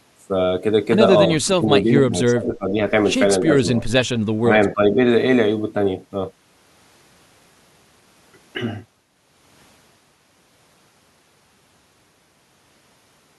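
From 1.4 to 2.78 s the speech sinks by as much as roughly 20 dB, then dips again at 3.53 to 3.61, 4.42 to 4.49 and 4.73 to 4.97 s: speech suppressed in double talk, likely an echo canceller ducking the talker. Unlike packet-loss dropouts, the voice is turned down in level rather than lost to missing data.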